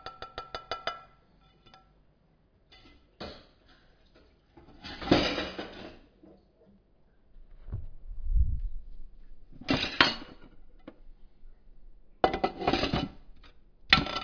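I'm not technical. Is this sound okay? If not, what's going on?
Yes, nothing wrong can be heard in this recording.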